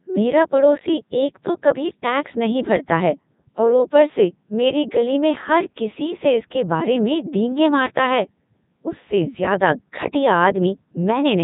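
Speech clip with a Codec 2 vocoder fault throughout. The voice sounds robotic and buzzy, rebuilt from sine waves rather than the original waveform. Nothing is above 3.8 kHz, which fits Codec 2's top 3.2 kbit/s mode.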